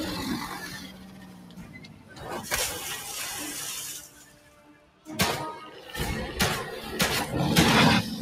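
A noise suppressor applied to music or sounds runs throughout, mistaking steady tones and tails for noise, so the level swings by roughly 15 dB, pumping and thinning the sound. Sound cut by the noise suppressor occurs from 0.52 to 2.26 s (drop about 12 dB), 4.04 to 5.08 s (about 11 dB) and 5.63 to 5.91 s (about 6 dB), where sustained sound sinks and decays are cut short.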